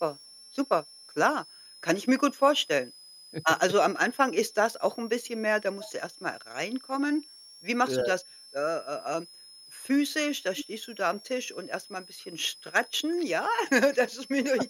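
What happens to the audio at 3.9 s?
Between 3.84 and 4.04 s the speech drops sharply, falling by about 35 dB in broken pieces that add up to roughly 150 ms. This is speech suppressed in double talk. The likely cause is an echo canceller that, with both sides talking at once, could not tell this talker from its own loudspeaker echo and turned the pickup down. Unlike a packet dropout, which gives clean gaps with hard edges, the level here is ducked and chopped.

Under this moment, as through the rest of the clip, a switching supply whistle sits high above the speech, around 5 kHz and roughly 25 dB below it. A switching power supply running in an audible burst mode or beating with another one produces this tone. It is not a steady hum or a rising feedback tone: the pitch wanders between about 5.0 and 5.5 kHz.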